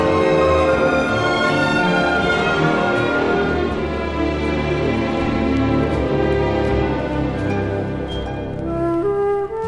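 No faults are audible anywhere in the clip.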